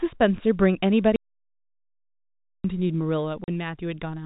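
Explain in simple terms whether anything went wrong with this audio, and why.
Two things went wrong with this telephone-quality speech.

The first is an audio dropout to silence, from 1.16 s to 2.64 s. For about one and a half seconds the sound stops completely. There is no faint background hiss, just dead silence, and then the speech resumes partway through. That pattern suggests the input signal was cut off, likely by a loose connection or a brief mute, while the recording kept running. Whatever was said during that stretch is lost.

The second is packet loss filled with silence, from 3.44 s to 3.48 s. Here a much shorter hole, about 40 ms, is punched into the speech. Calls send audio in small chunks called packets, and this gap fits two 20 ms chunks that never arrived. The receiver had nothing to play, so it inserted silence. The gap starts and stops abruptly, with hard edges.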